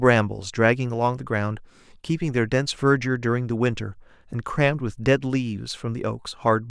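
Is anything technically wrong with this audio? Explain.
No, nothing in this speech recording shows a technical fault.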